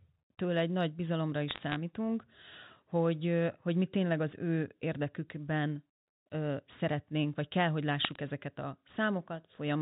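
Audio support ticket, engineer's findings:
Bit errors on a digital phone line. Crackle of sharp ticks 1.48–1.76 s, just after "egy nagy bizalomra". Component: G.711 mu-law 64 kbps transmission link. Flipped bits, a fraction of a percent, each corrupting one sample; high-order or sign hits produce the ticks.

Same fault 8.04–8.16 s, between "szeretnénk vagy kell hogy" and "ezeket a". Shorter burst, similar error rate. Speech underneath unchanged; the telephone coding itself shows the usual 4 kHz band limit.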